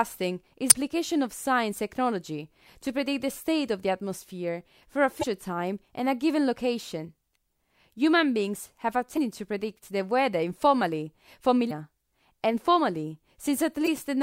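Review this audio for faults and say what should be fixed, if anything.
Damaged data in a compressed stream causes short glitches at 0.67–0.75, 5.19–5.24, 9.14–9.18, 11.67–11.72 and 13.84–13.88 s, where corrupted frames are misdecoded as the decoder loses sync. Prevent it with checksummed transport and error-correcting storage.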